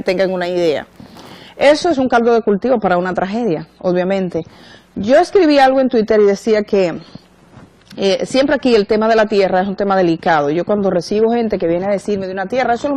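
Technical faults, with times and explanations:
1.61 s to the end, adaptive stream at a lower bitrate: the top end abruptly disappears above 13.6 kHz with no gap, and codec smear rises as the player switches to a leaner encode.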